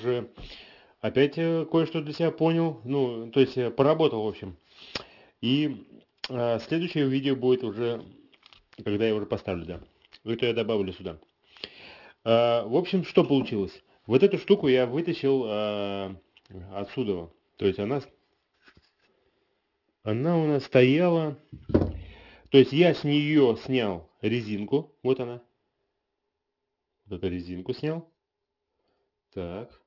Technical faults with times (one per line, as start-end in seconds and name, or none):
0.00-29.86 aliasing